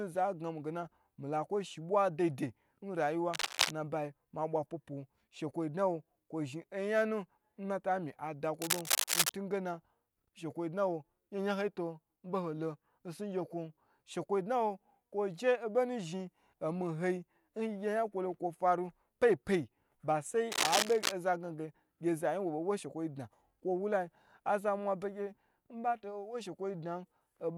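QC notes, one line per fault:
3.33–3.71 s, 8.61–9.31 s, 20.51–21.12 s: cable scratch noise, dense ragged rustling bursts about as loud as the speech, likely from a worn cable or connector being moved. Unlike isolated clicks or dropouts, each burst is a continuous, uneven scratch lasting a fraction of a second.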